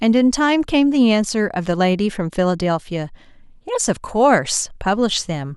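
No technical faults can be heard anywhere in the speech recording; the signal holds steady from its opening moment to its last.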